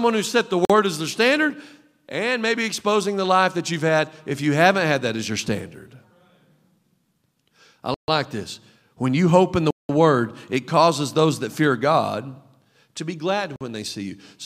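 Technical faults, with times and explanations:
0.65 to 13.61 s, blocks of digital silence: The sound drops to silence four times, at 0.65 to 0.70 s, 7.94 to 8.08 s, 9.71 to 9.89 s and 13.56 to 13.61 s. The gaps last 46 ms, 139 ms, 186 ms and 46 ms. The short ones fit a 2048-sample block, and the 186 ms one fits an 8192-sample block. Each edge cuts without a fade, so the short gaps sound like a pop and the longer ones like a hole.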